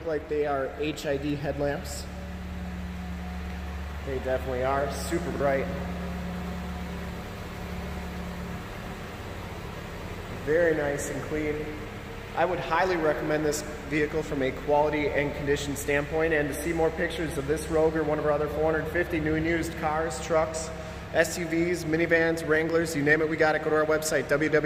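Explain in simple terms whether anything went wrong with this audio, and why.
At about 5.32 to 5.40 s, the audio has chunks out of order. The system handles sound in small blocks, here about 40 ms long, and one block arrived or was written one step late, so it played after the block that should have followed it. Nothing is missing, but those two blocks swap places, leaving three abrupt joins. You hear a brief jumbled moment where the pieces meet.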